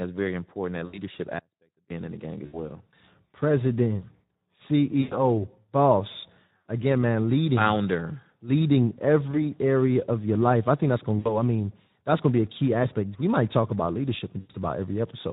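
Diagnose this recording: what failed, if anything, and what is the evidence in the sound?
Codec stage: the Speex codec is audible throughout as hoarse, noisy speech, which fits a low setting around 11 kbps. On a spectrogram, harmonics look smeared and grainy, and any energy above 4 kHz appears as a diffuse, noise-like wash rather than defined structure.

Network stage, VoIP packet loss concealed by the speech codec, at 0.86–0.99, 2.46–2.63, 5.01–5.24, 6.57–6.60, 9.31–9.43, 11.19–11.38 (between "I think that's gonna" and "I mean that's going") and 14.39–14.51 s (after "might talk about leadership"). Each gap lasts roughly 20 to 100 ms, which fits whole lost 20 ms frames. The decoder bridged each gap by extrapolating from the last pitch and filter with falling gain. On a spectrogram this shows as a flat, smeared continuation with a decaying envelope, and the speech stays weak just afterwards.

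Audio dropout to a faint residue, 1.39–1.90 s, about 0.51 s long, ending just before "in the gang". The sound cuts abruptly to a faint remnant about 35 dB below the speech, then snaps back. The waveform shows a sudden collapse to a thin band with hard edges, not a fade. The likely cause is an upstream break in the signal while the rest of the path stayed live.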